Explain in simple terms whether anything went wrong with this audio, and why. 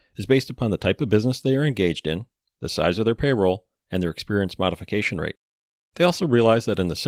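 Nothing went wrong here: the speech comes through as it should, and the Opus voice compression used on it is doing its ordinary job without causing any trouble you'd notice.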